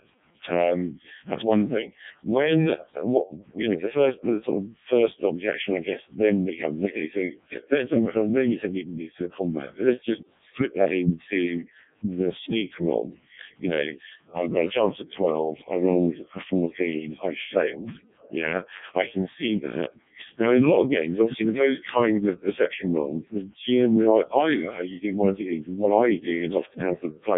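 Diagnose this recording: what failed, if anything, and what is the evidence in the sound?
Codec 2 vocoder damage runs through the whole speech clip at the codec stage: a robotic, buzzy voice with nothing above 3.7 kHz. The decoder rebuilds speech from sine waves using only pitch, voicing, energy and envelope, and the heavy smearing points to the lowest 0.7 kbit/s mode.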